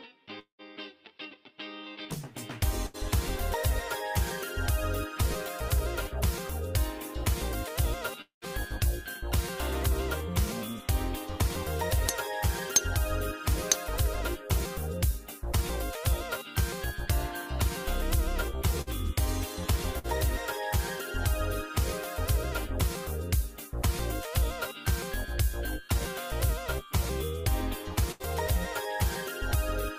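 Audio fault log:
0.39 to 0.62 s, long network dropout: the sound carries on as a fading buzz or hiss for about 190 ms, then about 120 ms of near silence. About 200 ms is missing when the audio resumes. This likely comes from a network stall.
2.87 to 2.97 s, burst of packet loss: about 80 ms of audio never arrived. The receiver stretches the last sound for about 70 ms and turns it down. It becomes a held buzz or fading hiss. Then the audio jumps ahead.
8.22 to 8.45 s, long network dropout: the last sound is held and fades over about 200 ms, leaving about 120 ms of near silence. About 200 ms of audio is lost. A likely stall in the network delivery causes it.
18.82 to 18.90 s and 19.99 to 20.07 s, burst of packet loss: about 40 ms is missing in each. The last sound is continued for about 50 ms while fading, giving a brief buzz or hiss. Then playback skips forward.
28.12 to 28.23 s, burst of packet loss: about 80 ms never arrived in time. 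The receiver holds the previous sound for about 80 ms, fading it down. Then the audio resumes further on, with that stretch gone.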